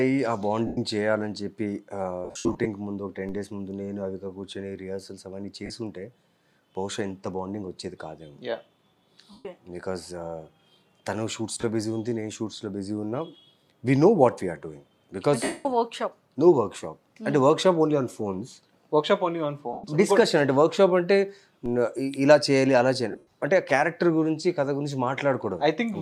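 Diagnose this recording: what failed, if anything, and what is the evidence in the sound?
Lost LE Audio frames on the Bluetooth link at 0.67, 2.25 to 2.66, 5.66, 9.32, 11.54, 15.44, 19.73 and 23.12 s. The LC3 decoder refills each gap with the last spectrum under random signs, which shows on a spectrogram as fading, noisy smears.

A DC step at 3.29 and 21.66 s, likely from a converter recalibrating or an input with an offset being switched in, heard as a low thump. The waveform baseline jumps, then relaxes back the way a 5 Hz high-pass would pull it.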